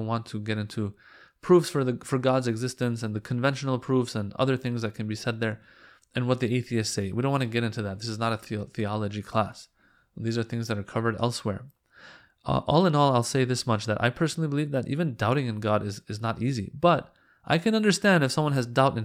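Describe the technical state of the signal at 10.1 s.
At 10.1 s the speech signal is intact, with no audible fault at that moment.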